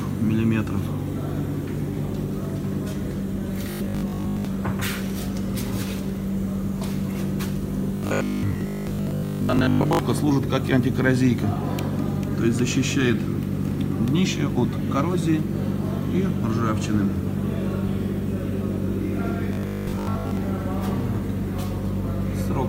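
Robotic sound from repeated short buffers at 3.71–4.45, 7.97–9.99 and 19.53–20.37 s: a rigid 50 Hz buzz, likely from 20 ms blocks looping, showing as identical waveform cycles and evenly spaced spectrogram harmonics.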